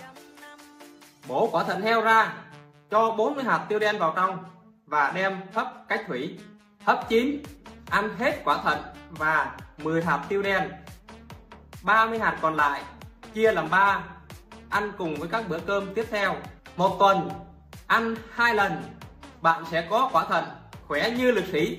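No faults detected anywhere in the audio.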